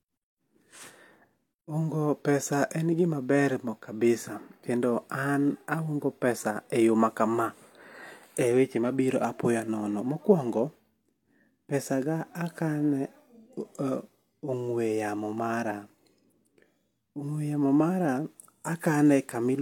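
Low-bitrate audio saved at a high bitrate runs throughout the speech, with nothing above 18.5 kHz and the artefacts of heavy compression still audible. The likely cause is a low-bitrate encode, consistent with 40 kbit/s HE-AAC, re-saved as high-bitrate MP3 that cannot restore the discarded detail.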